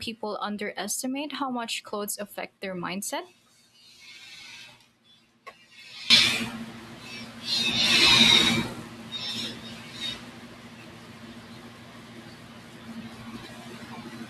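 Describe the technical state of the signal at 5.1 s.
At 5.1 s the speech sits about 22 dB down, faint, from 0 to 6.1 s. One channel inverted is the likely cause. Summed to mono, the shared centre cancels.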